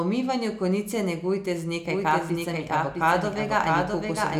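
From 1.86 s, just after "umivanju konice negujte z", a doubled audio track runs to the end: a second copy of the speech, about 5 dB quieter, trails by roughly 0.7 s. It's likely a second, slower capture path. Unlike room echo, it starts abruptly, repeats once, and has no decay or reverberant colour.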